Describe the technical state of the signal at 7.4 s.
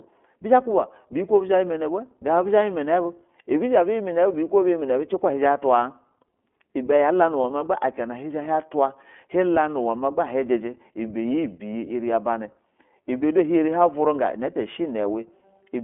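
At 7.42 s a single iLBC frame goes missing, and the gap runs to 7.45 s. That fits one lost 20 ms packet. The decoder fills the hole by repeating the last pitch cycle and blending in noise. It sounds like a brief held vowel with a faint buzzy, breathy edge. Each iLBC frame decodes on its own, so the voice is right again almost at once after the gap.

Underneath, the whole clip runs through the iLBC codec. The band is limited to about 250 Hz to 3.4 kHz, so there is no air or sparkle above that. The excitation is coded frame by frame, which fits 20 ms frames at 15.2 kbps. The damage is plainly audible. The speech has a slightly rough, synthetic grain throughout.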